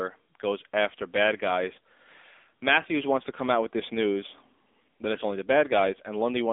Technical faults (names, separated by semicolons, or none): AMR narrowband mobile codec